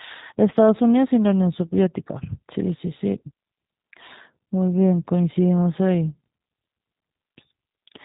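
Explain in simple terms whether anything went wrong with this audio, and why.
G.729 codec damage runs throughout the speech. This phone codec cuts everything above 4 kHz and rebuilds the voice from a simple model, so it sounds muffled and synthetic.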